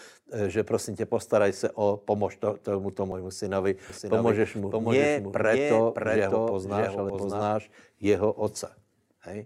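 At 1.12 s and 3.12 s, overlap between stream segments cuts a few milliseconds out at boundaries 2 s apart, leaving a click or tiny skip rather than a longer silent gap. From 3.9 s to 7.42 s a doubled audio track appears, likely an out-of-step second copy: a full-band repeat about 0.7 s behind, roughly 5 dB quieter, with none of the decay or room colour of a real echo, starting and stopping abruptly.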